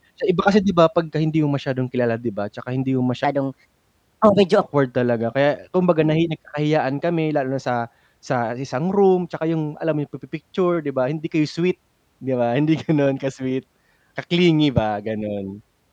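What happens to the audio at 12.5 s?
At 12.5 s the speech carries on intact, with no dropout, click, distortion or other fault at that point.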